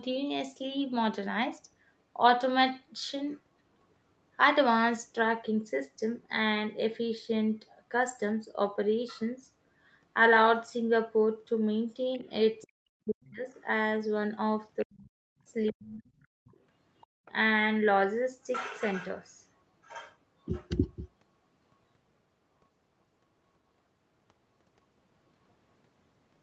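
From 12.14 to 12.67 s a faint second voice, roughly 30 dB below the talker, sits under the speech. This is the other side's voice leaking through, likely loudspeaker echo the canceller left in the microphone signal. On a spectrogram it shows as weak harmonic traces overlapping the main voice. Further brief scraps follow at 13.52 to 13.58 s (around 40 dB down) and 14.79 to 14.85 s (around 25 dB down), with a longer stretch from 15.67 to 17.31 s, again roughly 30 dB down.

From 12.65 to 13.45 s the talker's own voice is pulled down in pieces, at worst by some 40 dB, across about 0.7 s. This is speech suppressed in double talk, likely the canceller treating both voices as echo. The waveform shows the envelope collapsing in chunks. It happens again from 14.83 to 16.47 s, over about 1.5 s.

From 17.07 to 17.25 s the room sound drops by about 32 dB for about 0.2 s and then returns. This is background gated by the echo canceller while the loudspeaker was active, visible as a brief near-silent gap in the noise floor.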